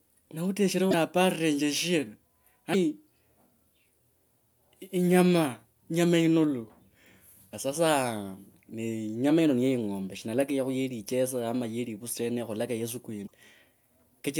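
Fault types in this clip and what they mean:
Broken MP3 bit reservoir: MP3 frames of about 24 ms borrow spare bytes from earlier frames, and when frames are lost the next frame reaches back and decodes bytes that belong to some other frame. In this speech clip that shows as three short glitches where the audio skips ahead: one of about 40 ms at 0.90 s just after "na uteshrenje", one of about 24 ms at 2.73 s, and one of about 50 ms at 13.26 s. The cause is likely lost frames.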